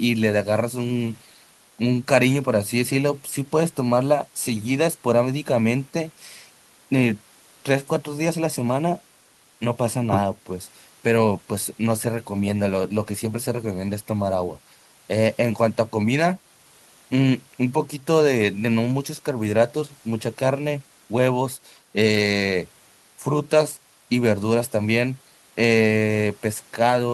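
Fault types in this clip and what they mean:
No fault types can be heard in this clip.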